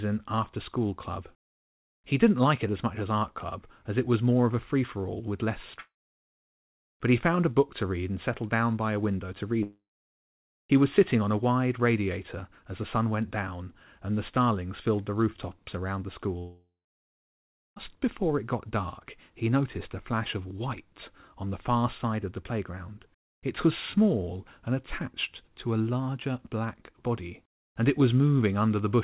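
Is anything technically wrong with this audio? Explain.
Yes. Three gaps in the speech sound like a long network dropout, likely caused by a stretch of packets that never reached the receiver. The first runs from 5.8 to 6.67 s after "for all with less", the second from 9.63 to 10.54 s after "by a window to", and the third from 16.38 to 17.78 s, between "the rooftops around the" and "before it got dark". Each time, the receiver stretches the last sound into a fading buzz or hiss and then goes silent for roughly 0.7 to 1.1 s before speech resumes, with about 0.86, 0.9 and 1.38 s of audio lost. The narrow call-codec bandwidth, with nothing above 4 kHz, is present throughout.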